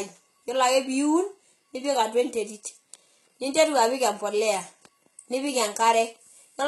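A speech clip with heavy compression damage throughout. Nothing sounds above about 11.8 kHz. The treble is synthetic, and s sounds come out gritty and lispy. This is likely HE-AAC compression, with upper bands copied from lower ones. The heavy damage fits a bitrate around 16 kbps.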